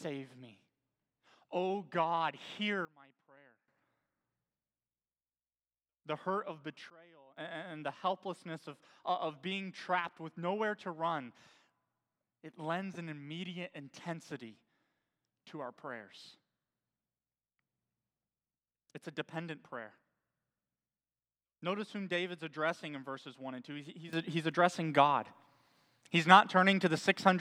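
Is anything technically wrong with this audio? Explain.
Yes. The speech has three sudden gain jumps. From 2.85 to 3.68 s the level drops by about 21 dB, then returns. From 6.9 to 7.37 s it drops by about 22 dB. From 24.13 s to the end it rises by about 12 dB. Each change happens instantly, with no fade. The likely cause is a digital gain setting applied without a ramp. The speech and the background noise shift in level together.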